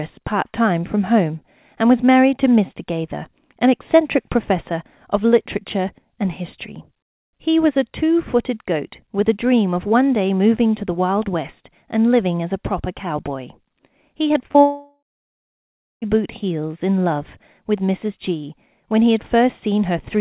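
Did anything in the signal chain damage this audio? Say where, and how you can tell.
Yes. From 14.28 to 14.57 s the speech turns choppy: six short holes, the longest about 38 ms, each filled by stretching the previous sound. This is repeated packet loss (robotic sound) at the network stage, patched by the call's jitter buffer on a G.711 path limited to 4 kHz.

From 14.61 to 16.04 s the sound smears into a fading buzz, then falls to about one second of silence before speech returns with roughly 1.4 s missing. The likely cause is a long network dropout, concealed briefly by the receiver before it gave up.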